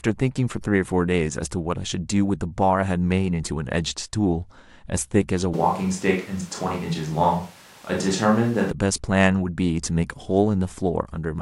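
From 5.54 to 8.71 s speech turns roomy, likely a switch to a distant microphone; spectrogram shows thinner bass and raised noise, waveform level unchanged.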